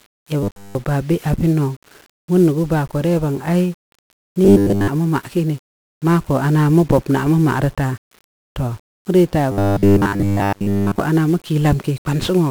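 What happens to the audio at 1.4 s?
At 1.4 s the speech carries the same 1-bit DFPWM compression heard across the whole clip. Each sample is reduced to a single up-or-down step of an adaptive level, which fits a 48 kbps stream. The result is heavy broadband quantisation noise: fuzzy, crackly, with treble lost in hiss.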